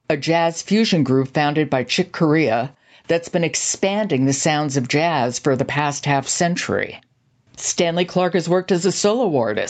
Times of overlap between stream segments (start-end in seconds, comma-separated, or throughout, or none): none